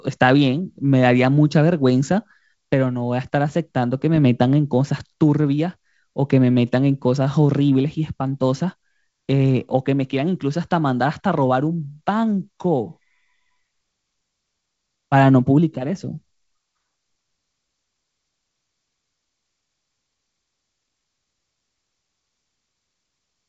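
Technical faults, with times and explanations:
No technical faults can be heard in the speech. The G.722 wideband telephone coding, at 56 kbit/s, is audible as a top end that stops near 7.7 kHz and a light layer of coding noise.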